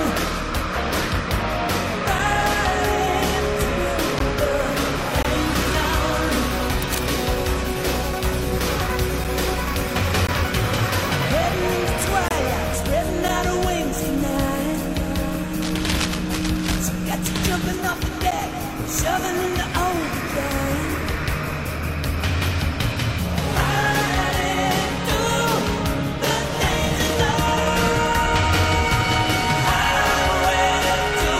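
Short, hard-edged dropouts cut into the sound at 2.19 s (about 6 ms), 4.19 s (14 ms), 5.23–5.25 s (22 ms), 9.24 s (7 ms), 10.27 s (16.5 ms), 12.28–12.31 s (24 ms), 13.28 s (8 ms) and 18.31 s (10 ms). They fall roughly whole seconds apart, each a gap between stream segments. The timestamps of consecutive 1-second segments leave a small space that the player fills with silence. The gaps vary from about 6 to 24 ms, but no audio goes missing.

Between 6.80 and 6.98 s, and again over a longer stretch from 15.62 to 16.79 s, a dense, irregular scratching and rustling sits over the sound at about 10 dB below it. This is cable scratch noise, likely from a worn cable, connector or control being moved so that its contact resistance fluctuates rapidly and injects uneven bursts of noise into the signal.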